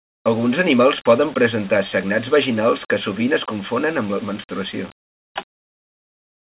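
No technical faults are audible.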